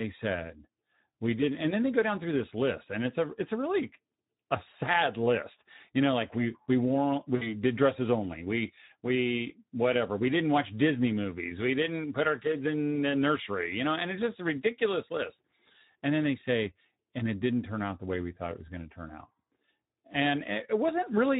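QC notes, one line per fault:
throughout Speex codec: plainly audible coding damage, with the speech sounding noisy and hoarse. The CELP coder has too few bits to model the excitation accurately, so the fine structure of the voice is replaced by rough approximations, consistent with a low setting near 11 kbps.
7.35–7.53 s VoIP packet loss concealed by the speech codec: about 60 ms of audio is missing, consistent with three 20 ms frames. The decoder fills the gap by extending the last pitch and filter at falling gain, giving a stretched, fading sound that stays weak briefly after packets resume.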